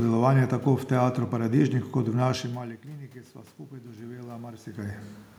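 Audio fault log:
3.68–5.06 s automatic gain rising: after the input fell by about 18 dB, the gain control eased its gain up by about 6 dB over 1.4 s, so the room noise swells with the voice, unlike the talker moving around 4.5 s.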